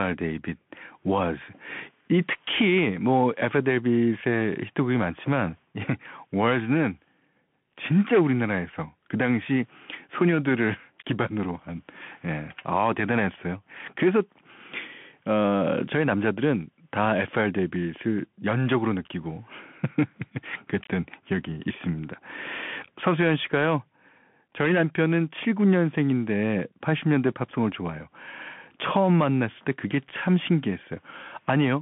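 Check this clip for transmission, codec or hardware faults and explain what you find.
One fault runs through the whole clip: the speech has been carried over a Bluetooth CVSD headset codec. Throughout, a one-bit up-or-down coder with an adaptive step tracks the waveform, which fits a 64 kbps stream. The band is confined to 150 Hz to 3.4 kHz, with nothing above 3.7 kHz. Loud, fast high-frequency content outruns the step, so s sounds turn scratchy, and a granular hiss sits under the speech; the codec damage is plainly audible.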